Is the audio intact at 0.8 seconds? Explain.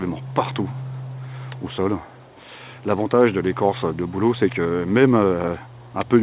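Yes, the audio is intact at 0.8 seconds: nothing drops out or breaks up there, and the only limit heard is the telephone-band sound of the WebRTC call path, with nothing above 4 kHz.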